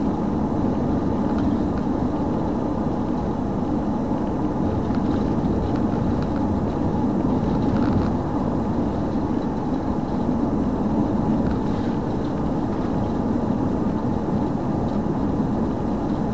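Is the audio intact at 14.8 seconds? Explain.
Yes, the audio is intact at 14.8 seconds, with no dropout, click, distortion or other fault at that moment.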